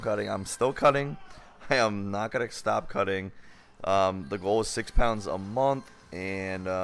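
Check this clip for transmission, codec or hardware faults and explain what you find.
Nothing in the clip points to a fault in how the audio was carried, encoded or captured. No part of the recording calls for comment.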